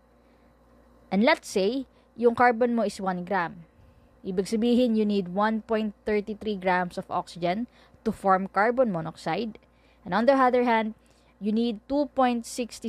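No technical faults are audible.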